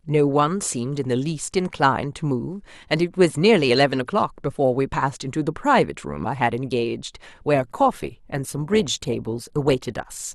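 Adaptive stream at a lower bitrate, from 7.56 s to the end at 10.34 s: the speech switches abruptly to a coarser encoding with no gap in the sound, as the stream stepped down to a cheaper version when the connection slowed. Codec artefacts become more audible. The loss in detail fits a step down in Opus from about 64 to 24 kbit/s.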